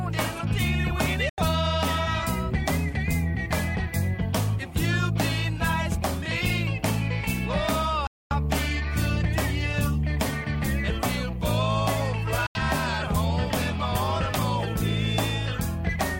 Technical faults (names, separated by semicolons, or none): Bluetooth dropout